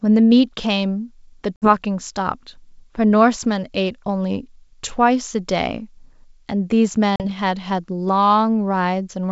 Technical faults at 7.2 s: packet loss on an ADPCM call

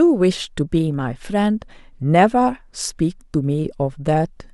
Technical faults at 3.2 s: none

